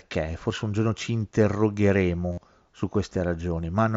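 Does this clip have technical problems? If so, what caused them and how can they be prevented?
Yes. From 2.32 to 2.38 s, about 52 ms, concealed Bluetooth headset packet loss replaces the mSBC wideband speech with a repeated recent waveform, a held buzzy tone at full level that warbles briefly as real audio returns. This fits a run of about seven lost frames. Keeping the headset close to the phone and away from crowded 2.4 GHz interference prevents it.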